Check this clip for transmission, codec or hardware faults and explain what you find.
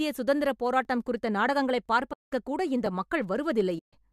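Two faults show up in this speech clip. Overlapping chunks occur at 0.85, 1.86 and 2.86 s: each 1.0 s chunk begins 6.5 ms before the previous one ends, so that sliver repeats, giving a regular tiny stutter-click.

AAC frame loss with muting occurs from 2.13 to 2.32 s (190 ms) and from 3.78 to 3.93 s (140 ms). The decoder zeroed the missing frames, which fits 10 ms frames from the low-delay AAC likely in use, so the sound fades into soft-edged holes.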